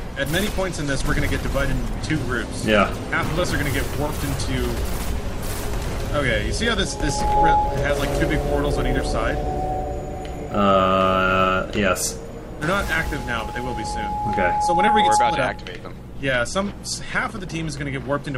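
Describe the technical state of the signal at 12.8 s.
At 12.8 s a loudspeaker feedback squeal is building. From 12.61 to 15.74 s a mic-to-speaker loop howls at 840 Hz, swelling over about two seconds to roughly 5 dB above the sound. A spectrogram shows a bright horizontal line there.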